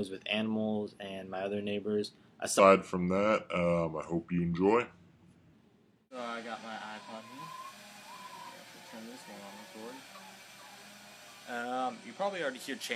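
From 2.59 to 5.53 s a section at the wrong speed plays at 0.8 times normal, likely from a wrong clock. Pitch drops about four semitones and tempo slows together, unlike a pure pitch shift. From 7.12 to 11.85 s, digital radio blending to analogue cross-fades over 0.31 s to FM and back. The level stays unchanged, but hiss appears around 30 dB below the signal, which marks it as an analogue fallback rather than a codec problem.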